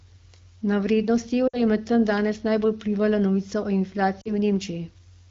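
From 1.47 to 1.62 s and again from 4.21 to 4.30 s, the speech briefly smears and sags. These are lost AMR speech frames: the decoder covers corrupted frames by reusing the last good pitch and vocal tract settings at falling gain. The gaps fit roughly three and two 20 ms frames.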